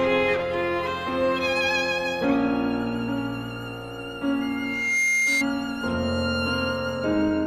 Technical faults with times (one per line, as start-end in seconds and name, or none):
4.41-5.46 loudspeaker feedback squeal